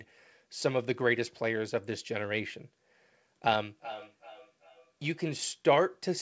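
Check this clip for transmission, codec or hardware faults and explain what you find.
One fault is audible in the speech. Feedback echo between two devices appears from 3.64 to 5.51 s: a second device replays the call into a nearby microphone, so the speech returns about every 0.4 s, peaking at about 16 dB below the speech, thin and ringing.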